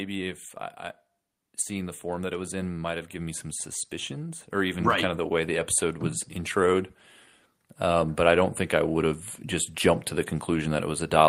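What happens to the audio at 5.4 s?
At 5.4 s the automatic gain is still rising, part of a slow climb from 1.67 to 5.76 s. The gain control judged the input too quiet and kept raising it, so speech and background swell together by about 7 dB across those four seconds.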